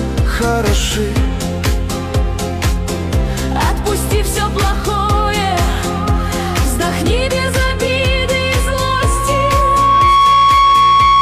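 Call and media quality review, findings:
Single steady tone at 1.1 kHz, swelling over roughly two seconds into a squeal that ends up about 5 dB above the programme, 8.03 s to end of clip. Loudspeaker feedback squeal: the microphone is picking up its own loudspeaker, and loop gain exceeds unity at 1.1 kHz, so that frequency regenerates each pass until the loop is broken or the amplifier limits it.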